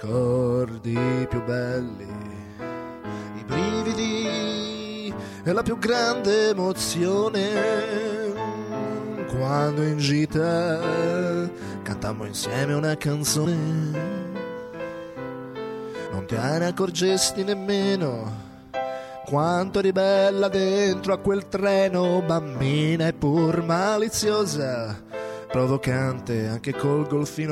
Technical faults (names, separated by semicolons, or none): compressed frames skipped